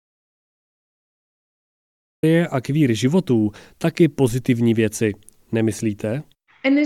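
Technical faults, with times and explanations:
0.00–2.23 s: audio dropout to silence, under way from the start; the gap is dead silence with no room tone, likely lost input recorded as silence.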